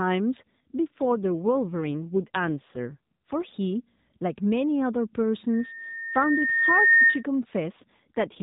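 It's a speech clip carried over an AMR narrowband mobile codec, and it has two AMR rate drops, from 0.47 to 3.55 s and again from 7.72 s through to the end. In both stretches the voice gets rougher and more buzzy and synthetic, with no gap and no change in bandwidth. That fits the network pushing the codec down from 12.2 to about 5.9 kbps to free up bits for error protection on a weak radio link.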